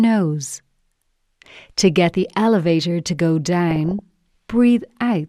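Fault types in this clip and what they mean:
DAB burbling: weak-reception bit errors slip past error correction, making sub-bands jump in level, so a stretch of burbling follows "the elevator to go".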